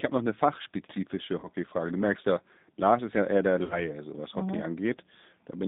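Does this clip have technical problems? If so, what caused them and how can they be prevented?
Yes. The G.729 codec shapes the whole speech clip: everything sits between about 200 Hz and 3.7 kHz, with a rough, synthetic texture. A spectrogram shows a hard ceiling near 3.7 kHz and smeared harmonics, which fits an 8 kbit/s pulse-coded voice path. Preventing it means using a wideband codec such as Opus or G.722 end to end.

VoIP packet loss concealed by the speech codec occurs at 1.40–1.48 s and 3.64–3.85 s. The decoder stretched its last pitch and filter over 30 ms and then 60 ms of missing audio. This appears as a buzzy tone or coloured noise that fades and weak recovery, visible as a flat, repeating waveform and smooth horizontal streaks. Avoiding it requires a stable network with jitter buffering, QoS priority or forward error correction.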